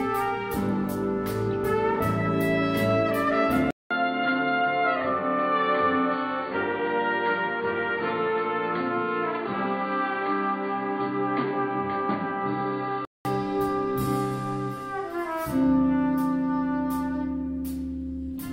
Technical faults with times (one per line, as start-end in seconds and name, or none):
3.71-13.25 input switched to a poorer device